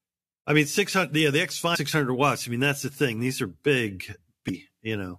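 At 1.74 to 1.76 s and again at 4.48 s the speech hits damaged data in the compressed stream: corrupted bytes make the decoder misread those frames and lose sync until it finds the next valid header, so you hear a brief glitch each time.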